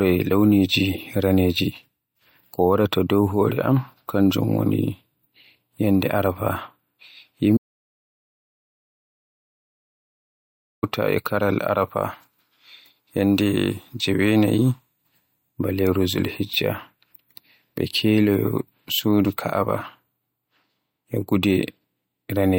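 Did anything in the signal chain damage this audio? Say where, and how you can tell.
Yes. The speech cuts off abruptly at 7.57 s and returns mid-flow at 10.83 s, with about 3.25 s of silence and no room tone between. That's an audio dropout to silence, likely an input-side loss where the recorder kept writing silence.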